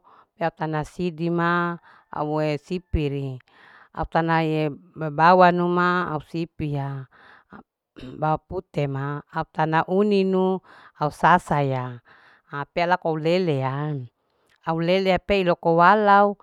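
No faults can be heard anywhere in this speech recording.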